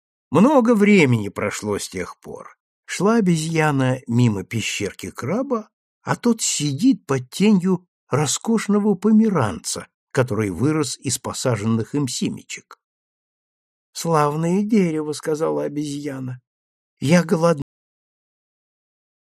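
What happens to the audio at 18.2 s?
Nothing is audible at 18.2 s: the sound stops abruptly at 17.62 s, mid-sound and with no decay, and from there to 19.31 s there is only flat digital silence. This is a cut-off end. The final stretch of audio was never written out or played back, so the recording simply ends partway through whatever was sounding, leaving the closing 1.7 s empty rather than letting the sound finish or fade.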